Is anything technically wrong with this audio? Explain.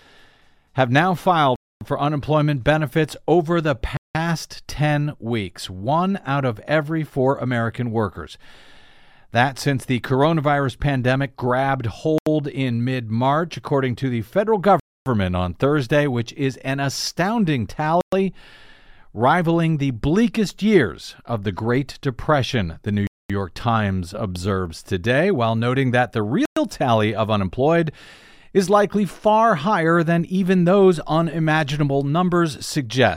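Yes. The speech drops to dead silence seven times, at 1.56–1.81, 3.97–4.15, 12.18–12.27, 14.80–15.06, 18.01–18.13, 23.07–23.30 and 26.46–26.57 s, for 80 to 270 ms each, then resumes. This is likely a Bluetooth stall, where delayed packets emptied the receiver's buffer.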